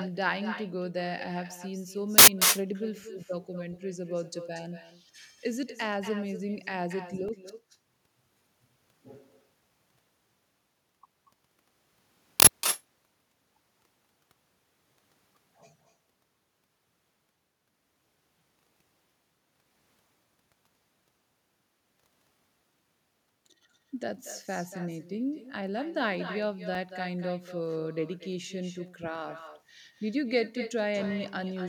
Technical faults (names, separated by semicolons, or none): echo with no canceller; uninitialised buffer; block of digital silence